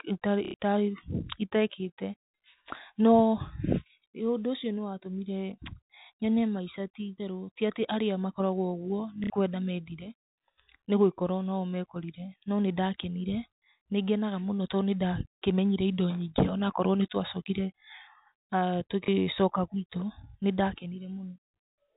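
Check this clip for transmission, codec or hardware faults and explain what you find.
Packet loss with last-packet repetition occurs three times, at 0.45–0.54 s, 9.24–9.30 s and 19.05 s. Each time the receiver replays the last audio segment. The first two runs give a short robotic stutter buzzing near 33 Hz, consistent with 30 ms packets, and the single repeat at 19.05 s gives a small blip. The telephone-band G.711 coding, cutting off at 4 kHz, is not a fault.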